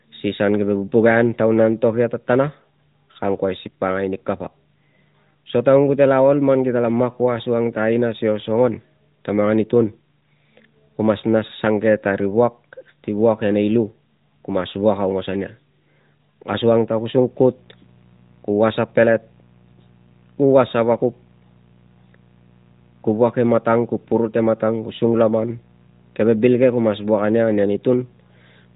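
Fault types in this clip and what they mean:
Mains buzz: sharp switching spikes from a dimmer, rectifier or poorly shielded line get into the signal twice per 60 Hz cycle, adding harmonics well into the kilohertz range. From 17.24 s to the end, a steady, raspy buzz sits under the speech at roughly 35 dB below it.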